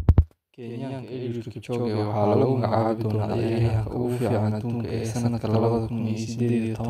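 One channel runs late by about 93 ms, which fits a 4096-sample buffer, and the two channels are then summed to mono. This channel delay (doubling) lasts the whole speech clip: every syllable is followed by a second copy at equal level, heard as a slap echo.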